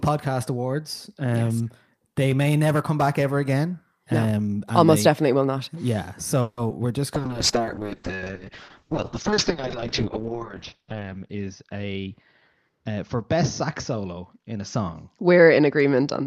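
At 6.41 s the speech stops moving forward and the last sound is stretched into a fading buzz or hiss for about 160 ms, until 6.59 s. This is a call audio freeze, likely from packets held up in transit that let the jitter buffer run dry. When delivery resumes, the speech continues from where it paused, so nothing is lost and the clip gains a 160 ms gap.

Just after, from 6.69 to 6.72 s, a short concealed packet loss follows. About 40 ms of audio never reached the decoder, and only around 10 ms was synthesised to cover it. The result is a brief smear or wobble. The receiver also drops roughly 30 ms of the built-up delay here.

From 7.15 s to the end, a call bitrate drop takes the encoder from 64 kbps down to 6 kbps, where it stays for 3.12 s at the lowest point. Audio bandwidth falls from 20 kHz to 6 kHz, so the speech turns muffled and rough, with a coarse, watery texture.

Overlapping the start of that drop, from 7.17 to 7.59 s, a jitter buffer slow-down repeats pitch periods to rebuild its reserve, adding 39 ms. 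Speech plays at 92% speed with unchanged pitch, so sounds are slightly drawn out.

Two jitter buffer speed-ups follow as the receiver trims excess buffered delay by cutting pitch periods. From 11.29 to 12.07 s the speech runs at 115% and about 150 ms is removed. From 12.69 to 12.97 s it runs at 111% and about 40 ms is removed. Both stretches keep their pitch but sound hurried.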